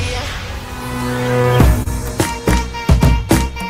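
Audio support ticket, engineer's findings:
Repeated stalls (stutter), 1.23 to 1.88 s. Packets arrived late or slower than playout, and the jitter buffer ran empty four times. The receiver extended the last audio across each gap: 62 ms total, longest 30 ms, about 10% of the span. Nothing is lost, but the sound drags and stutters.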